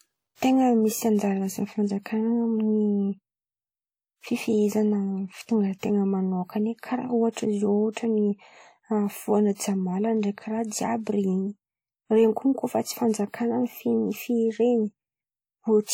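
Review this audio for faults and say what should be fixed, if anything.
The speech was likely encoded with WMA compression at a low bitrate, consistent with about 48 kbps. Long transform blocks spread quantisation noise over tens of milliseconds, so the whole clip sounds ringing and washy, with a hiss that swells and fades with the speech. Encoding at a higher bitrate from an uncompressed master would prevent this.

Pre-echo happens when the codec spreads the noise meant for a loud onset back into the quiet moment before it. A brief hiss lasting 45 to 48 ms comes before each of three attacks, softening them:
at 5.79 to 5.83 s, just before "manokan̈a karà";
at 7.32 to 7.37 s, just after "manokan̈a karà";
at 9.55 to 9.59 s.
An encoder that switches to short blocks on transients would prevent it.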